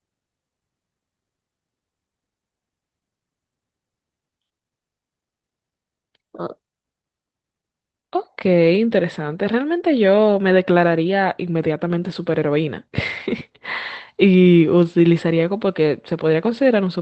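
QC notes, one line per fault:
No faults found; the speech carries the usual call-codec coding and a top end that stops near 8 kHz, consistent with an Opus call path.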